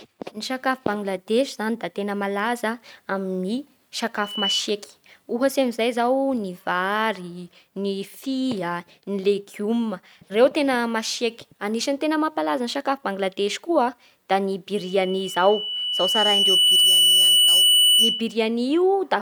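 Right after "koa da ny", at 14.74 s, a loudspeaker feedback squeal kicks in and hangs on until 18.38 s. It's a single tone at 3 kHz that swells over roughly two seconds until it sits around 10 dB above the speech. What's happening is the mic is hearing the speaker it feeds, and at 3 kHz the loop gain tipped past one, so that frequency kept feeding on itself and ringing louder.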